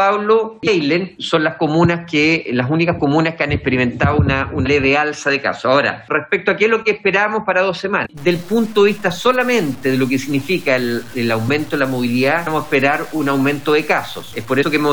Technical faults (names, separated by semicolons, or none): damaged data in a compressed stream; low bit depth without dither